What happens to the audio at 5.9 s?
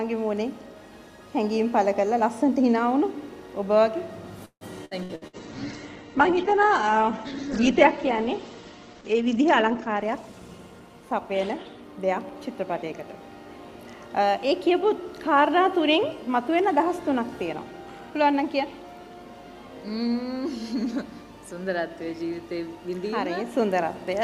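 At 5.9 s the audio is inside a call bitrate drop, running from 5.31 to 12.67 s. The encoder is starved of bits, consistent with a fall from about 64 to 10 kbps. It codes coarsely and cuts the top end from 20 kHz to 8 kHz. The sound turns muffled and rough, worst for about 3.9 s.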